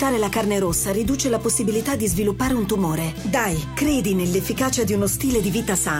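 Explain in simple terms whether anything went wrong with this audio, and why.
Nothing went wrong with this recording; there are no dropouts, glitches or other technical problems anywhere in it. What you hear is simply the sound as it was captured, with nothing added or broken along the way.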